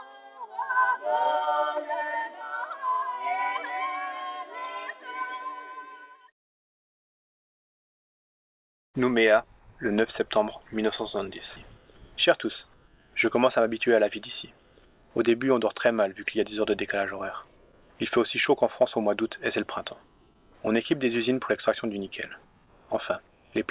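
No technical faults can be heard in this audio, which comes through a telephone-style call path with nothing above about 4 kHz.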